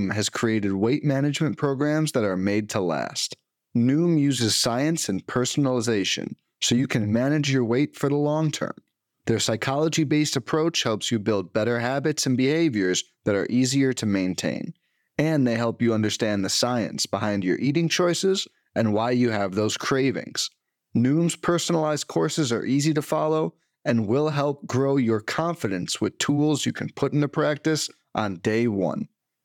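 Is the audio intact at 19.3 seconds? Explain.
Yes, the speech at 19.3 seconds plays through intact, with no dropout, glitch or other fault at that moment.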